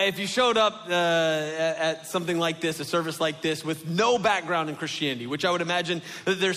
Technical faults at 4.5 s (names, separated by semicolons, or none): none